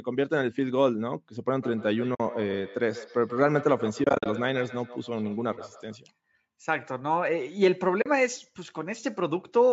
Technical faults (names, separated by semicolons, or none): feedback echo between two devices; AAC frame loss with muting